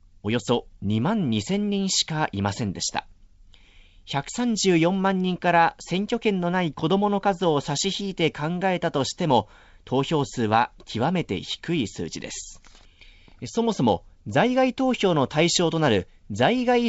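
No faults can be heard.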